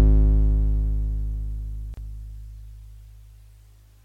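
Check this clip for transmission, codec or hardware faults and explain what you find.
There's one fault in this music. From 1.94 to 1.97 s, a gap at a join of encoded pieces drops out about 33 ms: separately encoded segments were spliced untrimmed, so encoder delay and end padding leave a silence with smeared edges before the music resumes.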